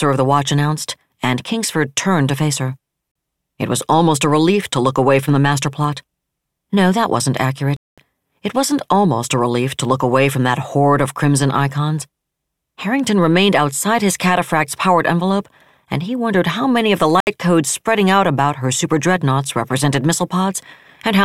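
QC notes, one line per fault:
3.12–3.15 s, 7.77–7.98 s and 17.20–17.27 s: Bluetooth stall, likely. The speech drops to silence after "turned to face her" (40 ms), after "that wasn't" (211 ms), and after "how many of the" (67 ms) before "codes spreading out about". The receiver's buffer ran empty while delayed packets were resent. Playback then resumed.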